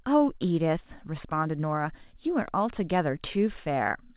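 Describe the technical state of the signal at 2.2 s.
At 2.2 s the speech is intact, carried by ordinary mu-law telephone coding with its usual 4 kHz ceiling and faint level-following hiss, and nothing breaks or distorts there.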